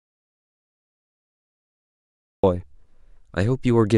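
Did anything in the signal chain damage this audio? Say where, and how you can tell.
Yes. Audio dropout to silence from the start to 2.43 s: pure silence with no room tone, likely a lost input link while recording continued.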